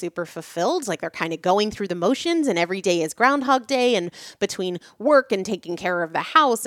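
Nothing goes wrong anywhere in this bit of speech, so there's no fault to point to at any moment.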